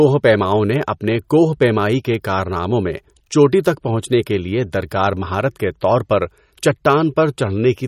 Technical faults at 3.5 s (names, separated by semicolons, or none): MP3 compression